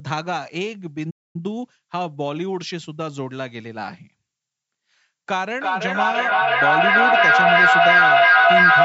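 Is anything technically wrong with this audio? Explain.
Yes, there are two faults.

From 1.10 s to 1.36 s there is a playback stall. The player likely ran short of data or its thread was held up, so output stopped for about 240 ms. The speech cuts off mid-flow into silence, then resumes.

From 5.35 s to the end there is a feedback echo between two devices. One device plays audio that another device's microphone picks up and sends back, and neither echo canceller removes it. The speech returns roughly every 0.3 s, building to about 12 dB above the speech instead of dying away.

The call microphone processing takes out the lowest bass, which is normal.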